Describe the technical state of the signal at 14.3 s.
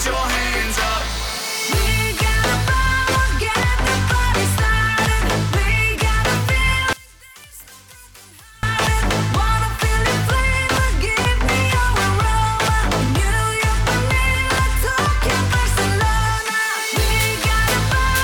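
At 14.3 s the signal is intact, with no audible fault at that moment.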